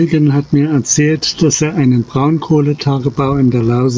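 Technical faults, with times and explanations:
Throughout, gain pumping: gain ducks around 10 dB under loud sounds, levels squashed; likely input gain too high, feeding a fast limiter.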